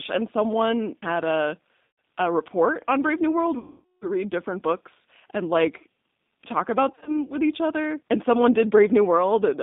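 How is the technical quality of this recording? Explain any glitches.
The technical quality is limited by narrowband codec damage throughout, with three dropouts.

The G.729 codec is plainly audible across the whole recording. It runs at 8 kbit/s and rebuilds the speech from a vocal-tract filter, a pitch predictor and a few pulses per frame rather than from the waveform itself. This gives the speech a rough, slightly synthetic edge. The band sits at roughly 150 Hz to 3.7 kHz, so the speech sounds thin and boxy, and everything above that band is gone.

VoIP packet loss concealed by the speech codec occurs three times. In each case the decoder lost incoming audio, kept extrapolating from its last pitch and filter settings, and lowered the gain as the gap went on. The first gap runs from 1.85 to 1.98 s and lasts 130 ms. The speech is stretched into an artificial sound that sags. The second runs from 3.59 to 4.08 s and lasts 430 ms. 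It is long enough for the sound to stretch out and fade. Because each frame builds on the one before, the speech stays weak and distorted for a short while afterwards. The third spans 6.92 to 7.18 s. About 90 ms is lost in short bursts, none longer than 30 ms.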